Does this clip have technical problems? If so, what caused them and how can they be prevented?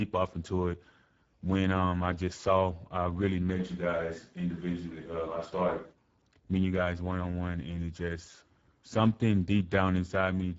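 Yes. Throughout, the speech sounds hoarse and grainy, with nothing above 7.7 kHz. This is Speex codec damage: at a rate that points to around 10 kbps, the codec has too few bits to model the excitation, so it becomes noisy. Prevent it by encoding at a higher Speex quality setting or using a modern codec.

From 3.6 s, right after "just saw I really", to 5.91 s, before "meeting you guys one", the voice abruptly turns roomy and hollow and loses bass, with faint room noise about 40 dB down, while the level stays about the same. The likely cause is a switch to a distant microphone after the close one dropped out. Prevent it by securing the close mic's connection and monitoring it during recording.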